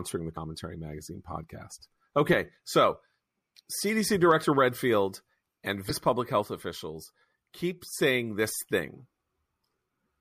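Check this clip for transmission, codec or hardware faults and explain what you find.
Two faults show up, both damaged data in a compressed stream, at 0.33 to 0.37 s and at 5.87 to 5.91 s. Corrupted bytes make the decoder misread those frames and lose sync, so the speech breaks into a short chirp or squawk lasting about 40 ms each time.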